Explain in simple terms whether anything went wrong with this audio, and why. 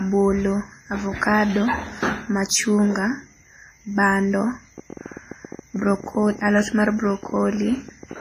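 Yes, two things went wrong. Throughout, the speech sounds washy and ringing, with a hiss that swells and fades along with the voice, and the very top end is missing above about 15.3 kHz. That is WMA compression, most likely squeezed hard to a small file, so the encoder smeared its errors over time and threw away quieter detail.

From 4.78 s to 8.14 s, a train of clicks ticks over the speech at an uneven pace, about 16 per second and around fifty in all, and they are loud enough to stand out against the voice. They likely come from electrical interference or a faulty connection or power supply.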